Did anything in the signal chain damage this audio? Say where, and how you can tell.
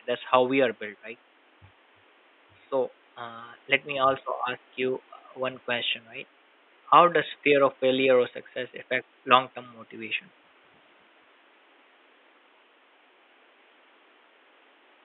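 No, nothing in the chain has damaged this speech; the only thing under it is the room's own background noise, sitting about 35 dB below the voice, which was captured at the microphone and is not a system fault.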